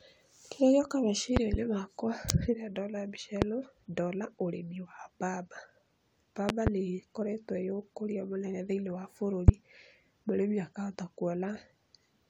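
Speech interrupted by six loud pops in four bursts that jump well above the voice, which carries on underneath each one. A double pop spans 1.37 to 1.57 s, a single sharp pop falls at 3.42 to 3.45 s, another double spans 6.49 to 6.70 s, and a final single lands at 9.48 to 9.51 s. The singles peak about 25 dB above the speech and the doubles about 20 dB. The likely cause is a voltage spike from a connector, switch, static discharge or driver glitch.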